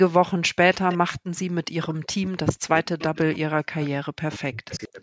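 From 0.72 to 0.98 s a faint copy of the speech trails about 181 ms behind at about 15 dB down. It returns at 1.35–1.42, 2.99–3.03, 3.81–3.9 and 4.73–4.85 s, sometimes as low as about 30 dB down. That's an echo leak, likely loudspeaker pickup the echo canceller didn't fully remove. From 1.85 to 3.81 s, and again from 4.11 to 4.99 s, the speech keeps dipping out, by as much as about 40 dB. That sounds like speech suppressed in double talk, likely the canceller ducking everything while both ends talk.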